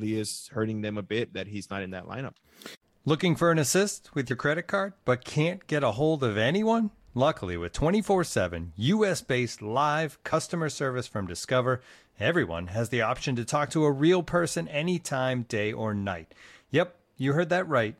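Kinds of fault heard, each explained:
Compressed frames skipped: whole coded frames never played, missing from the file or refused by the decoder as damaged, so the speech jumps ahead. Roughly 50 ms vanishes at 4.30 s and roughly 20 ms at 10.32 s.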